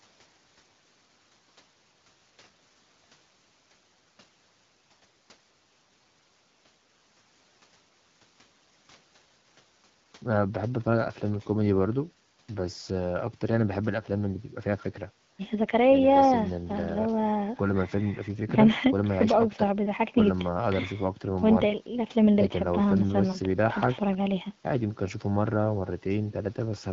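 No faults in this speech recording, which comes through AMR wideband (HD Voice) at 12.65 kbit/s with only the light coding texture expected at that rate.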